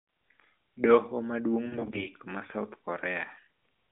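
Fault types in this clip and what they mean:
AMR bit errors, from 1.66 to 2.08 s: over this stretch of speech, a heavy share of the less protected bits in a run of 20 ms AMR frames arrived corrupted while each frame still passed its integrity check. The excitation pulses were placed wrongly and the fine pitch, gain and spectral values decoded off-target, so the voice keeps roughly its level and pitch but goes hoarse, scratchy and gargly, standing out against the lightly coded narrowband sound on either side.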